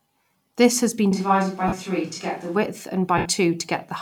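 Right after "has been", at 1.12 s, the speech abruptly turns roomy and hollow, thinner in the bass, about 5 dB quieter, with background noise roughly 30 dB below it, until it snaps back at 2.56 s. This is likely a switch to a distant microphone, a farther pickup standing in for the close one.

Within that stretch, from 1.68 to 1.73 s, the sound smears into a brief noisy blur for 45 ms. A second, longer smear of 75 ms runs from 3.18 to 3.26 s and fades toward silence. Both are lost LE Audio frames. The LC3 decoder fills each gap by repeating the last spectrum with scrambled signs, which fits runs of 7.5 ms frames.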